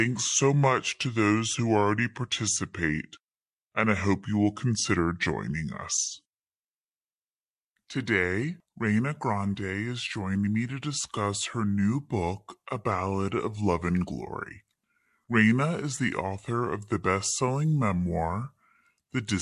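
From start to finish there's a wrong sample rate problem. The speech drags at two-thirds speed and sits about seven semitones low, which fits 48 kHz material being played back at 32 kHz with no conversion, so pitch and tempo drop together.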